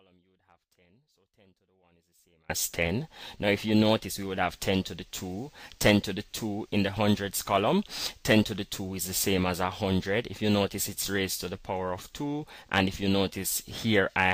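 From the very start until 2.50 s the audio sits in an audio dropout to a faint residue: the wanted signal is absent and only a faint leak of it remains, around 35 dB below its normal level. It then returns abruptly at full level. That sudden step, with audible residue beneath it, separates it from a natural pause or a fade-in. The likely cause is a break in the signal feed while the downstream path stayed live.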